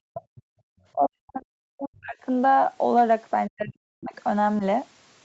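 Speech suppressed in double talk, from 0.09 to 0.23 s: the speech sinks by about 40 dB for roughly 150 ms, the likely result of an echo canceller that could not tell this talker apart from loudspeaker echo while both sides spoke, so it pulled everything down together. The audio dips sharply, thins and briefly breaks apart instead of fading naturally.

The other side's voice leaking through, from 0.19 to 0.42 s: a faint second voice sits roughly 30 dB under the main speech. The far end is playing on a loudspeaker, and the canceller likely failed to subtract all of it from the microphone, so this residue comes through.

Background gated by the echo canceller, from 0.51 to 0.65 s: the room tone drops by about 40 dB for roughly 150 ms, then returns. While the loudspeaker was active, the canceller clamped the microphone hard, and the ambience vanishes abruptly instead of sitting steadily underneath.

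Speech suppressed in double talk returns from 0.93 to 2.18 s, with about a second of the speech pushed down by around 40 dB in choppy stretches, and again from 3.47 to 4.15 s for roughly half a second at similar depth. In both spans the level collapses and recovers in pieces. Throughout, the Opus call path limits content to 8 kHz.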